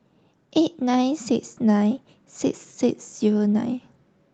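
No technical faults can be heard anywhere in the recording.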